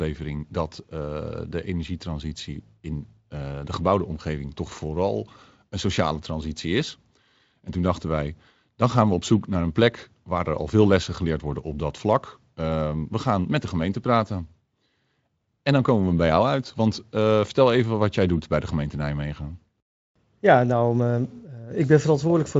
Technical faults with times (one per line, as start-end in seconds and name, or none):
none